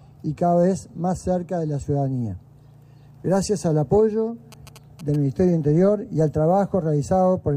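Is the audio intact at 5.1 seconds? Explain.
No: GSM signalling bursts from 4.52 to 5.16 s, rectified radio pulses at about 217 Hz, a galloping dit-dit-dit of short buzzes well below the signal, showing as grouped vertical spectrogram lines.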